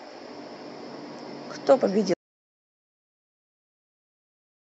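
At 2.14 s an audio dropout to silence runs to the end: speech stops abruptly, likely from lost input, into dead silence with no room tone, not a fade.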